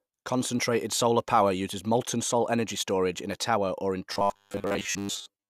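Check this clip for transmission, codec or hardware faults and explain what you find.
One fault is present. From 4.13 s, just after "a tower or in", to the end at 5.49 s, there is robotic sound from repeated short buffers. Audio likely arrived too slowly, so a 10 ms chunk was replayed over most of the gap. The repeats impose a fixed 100 Hz buzz. The speech turns rigid and metallic, following its shape only loosely.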